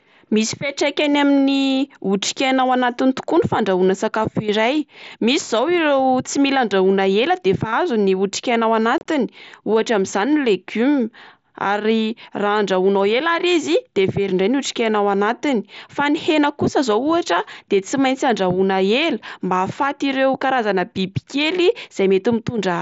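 At 8.98 to 9.06 s, just after "otrikaina ao", unconcealed Bluetooth headset packet loss removes about 60 ms of speech across a 75 ms span, with a longest gap of 30 ms. Lost headset packets were replaced by silence or an idle pattern rather than being filled in. The result is a brief chopped patch of short holes with abrupt edges in the wideband mSBC link.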